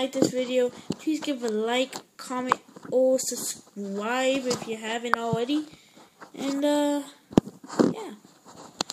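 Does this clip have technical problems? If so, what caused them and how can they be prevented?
No, nothing stood out as a technical problem on listening to this clip.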